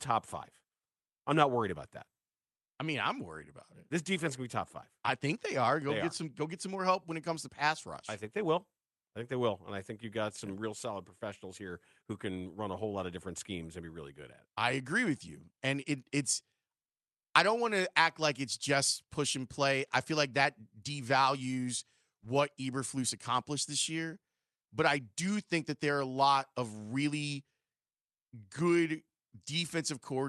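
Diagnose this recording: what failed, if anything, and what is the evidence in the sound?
Uneven, small timing hiccups recur through the whole clip. This is clock drift between sender and receiver at the jitter buffer, with the sender running roughly 4 percent fast.

From 0.11 to 30.17 s the speech hurries with tiny skips. These are repeated timing corrections: the receiver's buffer cuts short pieces, playing at 104 percent speed.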